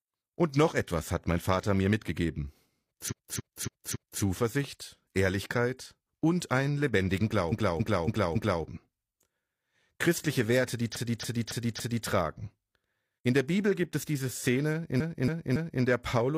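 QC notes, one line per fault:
3.07–4.19 s, 7.48–8.60 s, 10.92–12.03 s, 14.96–15.79 s: repeated frames. A 278.6 ms block of compressed audio plays four extra times (three in the last run), giving a stutter. Unlike a dropout or skip, nothing is lost. The identical block recurs at a fixed 278.6 ms rate, and each run adds 1114.6 ms (835.9 ms in the last).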